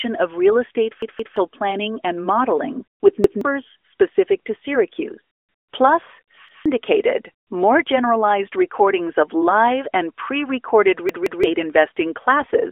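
Speech carried over an AMR narrowband mobile link suffers a repeated buffer fault four times. New audio failed to arrive in time, so the device replayed its last block, about 171 ms long, which fits an 8192-sample buffer. Each repeat is a hard-joined stutter. After "of real estate" the block plays twice more between 1.02 and 1.37 s, and about 0.3 s of audio is lost before "planning and modeling with". After that phrase, a single repeat at 3.24–3.41 s comes before "specific to". Another single repeat falls at 6.49–6.66 s. After "live and pre recorded", a double repeat at 11.09–11.44 s drops another 0.3 s or so. Near the end, AMR bit errors hit six frames between 12.40 and 12.52 s: roughly one bit in fourteen in the weakly protected parts of each frame was flipped while the checksum still passed. The misplaced excitation pulses and wrong fine parameters make that moment hoarse and gargly, within the band-limited phone sound.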